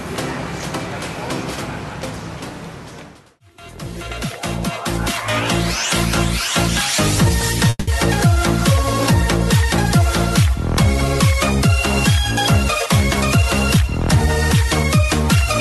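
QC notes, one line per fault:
7.69–7.90 s, call audio freeze: the audio stalls for about 0.21 s. The last sound is carried on as a fading buzzy fill for about 180 ms, then drops to about 20 ms of silence before resuming exactly where it left off. Nothing is lost; the stall instead inserts a gap and adds about 180 ms of delay. This points to delayed packets that likely drained the jitter buffer.
13.35–13.84 s and 14.26–15.37 s, jitter buffer speed-up: in both spans the sound plays faster at unchanged pitch and comes across as hurried. The first span runs at about 114% speed and removes roughly 70 ms. The second is gentler, at about 107%, and removes roughly 100 ms. The receiver trims short pitch-period-length slices in succession to shrink a buffer that had grown beyond its target, pulling the added latency back down.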